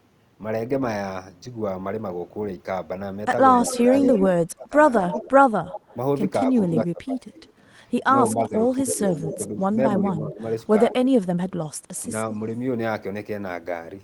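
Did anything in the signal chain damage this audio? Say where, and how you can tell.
Yes, in call processing. An echo leak appears at 3.63–6.6 s, 8.43–9.38 s, 10.9–10.94 s and 11.97–12.03 s as a distinct delayed copy about 200 ms behind the sound. Its level falls from about 10 dB below to about 40 dB below. The likely cause is a far-end echo canceller passing residue. The fixed, discrete delay sets it apart from room reverb.

Speech suppressed in double talk shows at 3.64–4.74 s, dipping by roughly 25 dB for a few hundred milliseconds, and at 6.5–10.93 s, dropping about 15 dB over roughly 1.5 s. These dips coincide with the echo intervals, likely from the canceller attenuating its own talker along with the echo. They are partial and overlap-bound, unlike clean packet-loss gaps.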